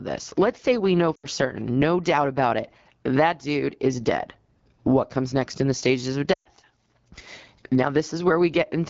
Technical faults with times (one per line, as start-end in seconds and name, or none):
0.00-8.90 AMR wideband (HD Voice) codec
1.15-1.26 lost AMR speech frames
6.33-6.49 lost AMR speech frames